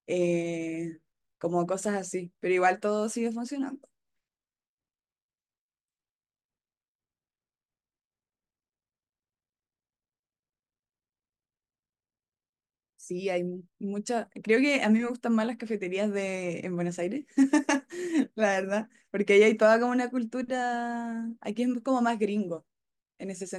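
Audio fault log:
Nothing stood out on listening to the speech in this recording.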